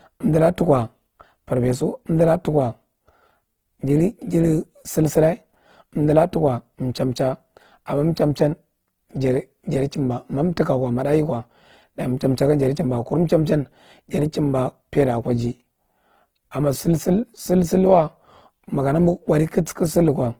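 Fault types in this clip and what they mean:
Opus compression: The speech was likely squeezed through the Opus codec at a very low bitrate, consistent with about 16 kbps in its CELT mode. Short of bits, the encoder holds each band's energy but refills fine detail by copying lower bands or adding noise. The bandwidth stays full, with content reaching about 20.2 kHz, yet the damage is plainly audible throughout: the speech turns grainy, rough and noisy rather than swirly or hollow.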